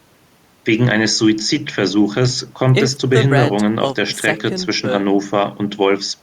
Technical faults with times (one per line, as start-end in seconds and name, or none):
none